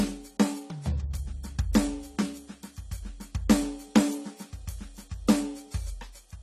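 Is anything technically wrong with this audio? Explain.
Yes, the music carries AAC compression damage, and it's plainly audible from start to finish. There's nothing above about 14.1 kHz, so the top end sounds dull and closed in. Held notes pick up a smeared, warbly fizz. That's likely AAC-LC run at a low rate, and the narrow band fits something around 32 kbps. With that few bits, the encoder drops the highs and quantises the remaining bands coarsely, which is what smears the texture.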